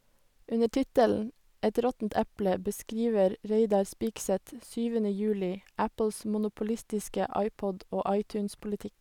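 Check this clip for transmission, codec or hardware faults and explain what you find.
Nothing wrong can be heard anywhere in this speech.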